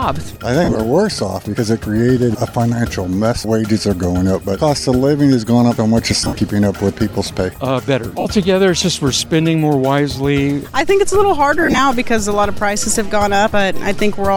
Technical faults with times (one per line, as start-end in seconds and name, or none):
0.64-0.75 lost LE Audio frames
6.21-6.35 lost LE Audio frames
8.20-8.26 lost LE Audio frames
11.61-11.79 lost LE Audio frames